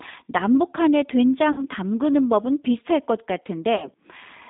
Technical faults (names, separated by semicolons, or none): G.729 codec; VoIP packet loss concealed by the speech codec